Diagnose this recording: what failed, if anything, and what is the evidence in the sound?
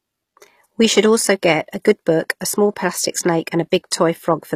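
Throughout the speech, s sounds are gritty and metallic, and the treble stops near 15 kHz. This points to the codec stage, likely HE-AAC compression at about 24 kbps, where treble is rebuilt from copied lower bands and its harmonics misalign.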